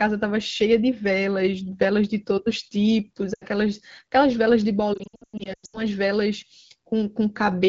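At 3.33 s the speech smears and dips for about 80 ms. From 4.93 to 5.81 s it repeatedly stretches, fades and returns rough, with gaps up to 100 ms. These are lost AMR speech frames: the wideband decoder repeats the last good settings at falling gain.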